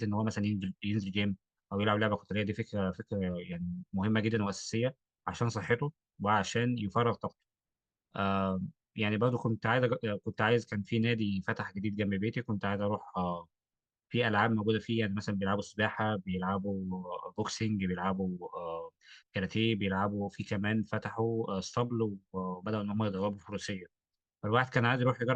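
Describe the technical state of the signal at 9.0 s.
At 9.0 s the signal is intact, with no dropout, distortion or other audible fault at that point.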